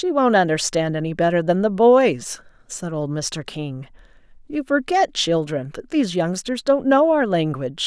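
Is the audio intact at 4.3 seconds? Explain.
Yes, the speech at 4.3 seconds plays through cleanly, with no dropout, click, distortion or other fault at that moment.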